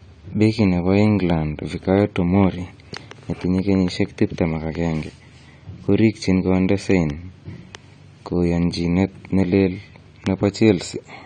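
Throughout, the speech sounds dull and smeared, with fizzy sibilants and nothing above 9 kHz. This is likely AAC compression at a low bitrate, around 32 kbps.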